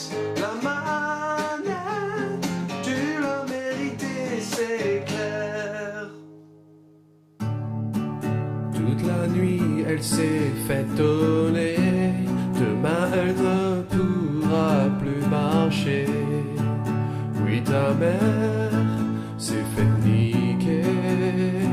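Nothing in the audio stood out as a technical fault on listening.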